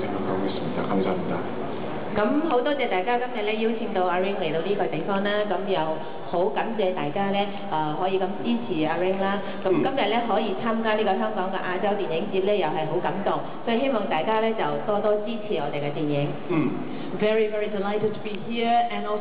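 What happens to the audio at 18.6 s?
Clock slip clicks run from 0.19 s to 19.16 s. Faint, regular ticks come about ten times a second. Unsynchronised clocks likely drop or repeat single samples.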